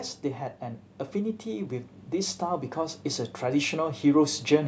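From 0.59 s to 4.63 s, automatic gain rising lifts the level by about 6 dB. Speech and background swell together as the control compensates for quiet input.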